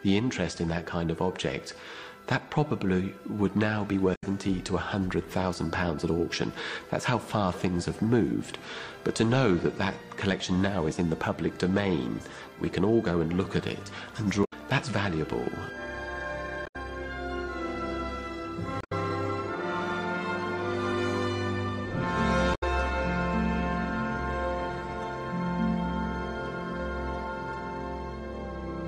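Damaged data in the compressed stream shows up as short blips at 4.12, 14.41, 16.63, 18.78 and 22.51 s, each roughly 0.12 to 0.15 s long, where corrupted frames throw the decoder off until it finds the next good frame.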